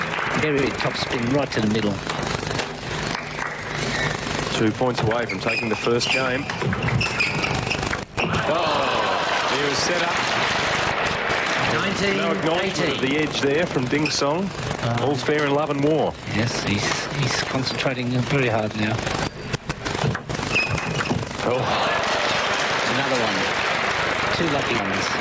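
Gain pumping runs through the whole clip. The gain swings by around 15 dB, likely from input gain set far too high and clamped by a fast limiter. Unlike a noise gate, it breathes rather than cutting out.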